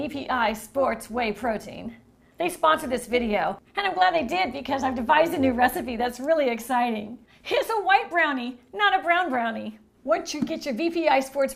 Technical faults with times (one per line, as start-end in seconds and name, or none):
0.00-6.16 overlap-add ripple